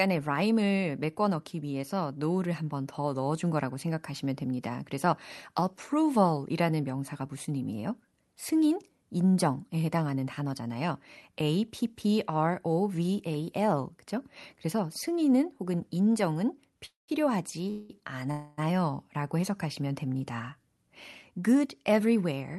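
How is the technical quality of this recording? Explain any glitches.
The speech has two kinds of glitches, call audio freezes and a jitter buffer speed-up, carried over a call codec whose band limit near 12 kHz points to Opus at a modest bitrate.

Call audio freeze, at 16.85–17.10 s, 17.70–17.91 s and 18.31–18.60 s: the jitter buffer likely ran dry while packets were delayed, so the receiver stretched the last sound into a fading buzz lasting 227 ms, 191 ms and 264 ms. The first fades into about 160 ms of silence. Speech then resumes where it stopped, with nothing lost but later timing.

Jitter buffer speed-up, 21.39–22.56 s: with more audio held in the buffer than it aims for, the receiver trimmed short pitch-period slices repeatedly, removing roughly a tenth of a second. The speech plays at about 109% speed with unchanged pitch, sounding slightly rushed to the end.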